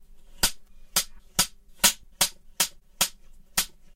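A short recording of sounds, and the whole thing has a hollow, phasey colour from channel delay (comb filtering): one side runs around 5 ms late, so the mono sum cuts evenly spaced notches starting near 100 Hz. At 2.03 s there are compressed frames skipped, with roughly two of the 32 ms frames, about 70 ms of audio, missing, so the sound jumps ahead at that point.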